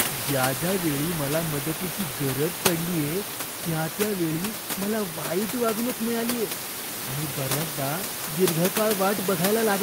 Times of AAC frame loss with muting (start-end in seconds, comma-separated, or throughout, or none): none